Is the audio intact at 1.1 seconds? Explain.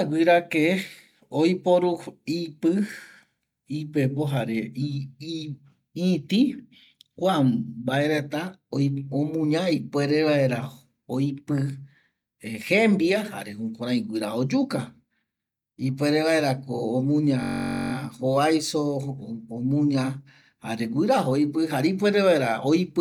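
Yes, the speech at 1.1 seconds plays cleanly, with no dropout, click, distortion or other fault at that moment.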